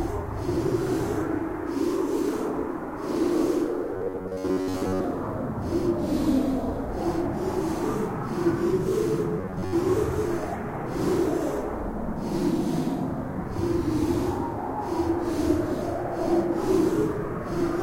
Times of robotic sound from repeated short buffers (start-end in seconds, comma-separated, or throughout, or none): 3.93-5.04, 9.39-9.73